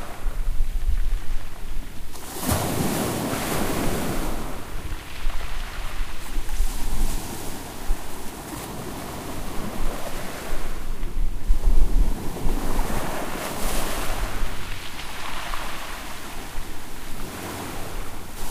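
Nothing technically wrong turns up in this recording of everyday sounds, so there's no fault to point to here.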